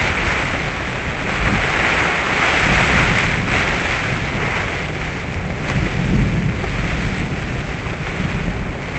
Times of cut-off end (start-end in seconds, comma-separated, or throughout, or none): none